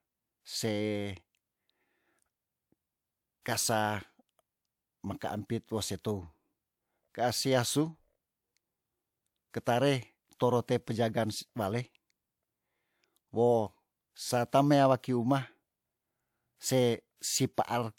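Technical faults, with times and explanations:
Throughout: sample clock jitter. The converter's timing wanders by something like half a microsecond, so each sample lands slightly early or late and picks up an amplitude error proportional to how steeply the waveform is moving at that instant. In this speech the result is a faint hiss and graininess riding on the louder syllables and on sibilants and other bright consonants, sitting roughly 45 dB below the signal, and dropping away entirely in the pauses.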